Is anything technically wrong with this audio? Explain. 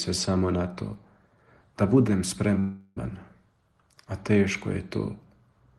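Yes. From 2.59 to 2.98 s there is a call audio freeze: the sound stalls into a buzzy or hissy, fading continuation of its last moment for about 0.37 s, then resumes exactly where it left off. The likely cause is delayed packets draining the jitter buffer, so the receiver filled the wait, inserting a gap rather than losing any audio.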